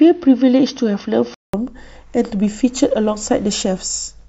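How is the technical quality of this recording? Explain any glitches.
The recording has one clear fault at the start. From 0 to 1.54 s the speech is band-limited, so it sounds dull and boxy. It also carries a faint noise floor well below the speech. At 1.54 s there is a gap of about 0.19 s, and the full bandwidth returns. The level barely changes. This is likely an input switched to a poorer device, and then back to the main microphone.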